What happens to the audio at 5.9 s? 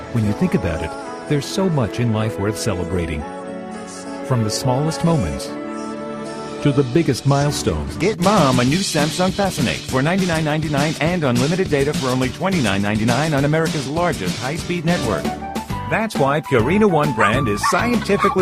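The moment falls within repeated timing corrections running from 4.35 to 18.36 s. The receiver trims short pieces to keep pace, so the sound plays at 104 percent with slight, unevenly spaced hiccups. The cause is clock drift between sender and receiver: the sender's clock runs roughly 4 percent fast, so the buffer keeps overfilling. Unlike packet loss, every edit removes audio, with no silent gaps or smeared fill-ins.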